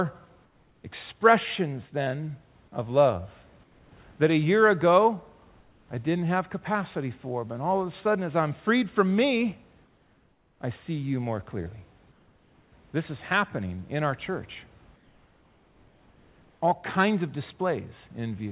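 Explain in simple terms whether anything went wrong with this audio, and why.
Comfort noise in place of the background: during pauses the sender likely stopped transmitting, and the receiver filled each gap with invented noise. You hear the real room sound swapped for a flat, slightly quieter hiss at 0.44–0.84, 3.64–3.92, 5.6–5.88, 9.84–10.6, 12.12–12.72 and 14.96–16.6 seconds.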